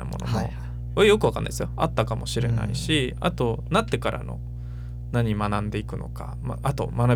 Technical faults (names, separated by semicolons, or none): mains hum